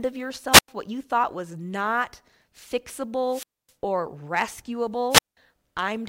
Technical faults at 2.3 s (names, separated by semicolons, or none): none